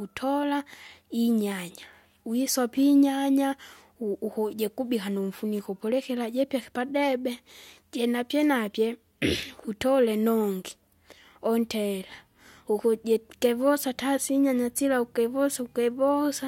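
Nothing goes wrong anywhere in this recording: no dropouts, glitches or other technical faults turn up at any point while it plays.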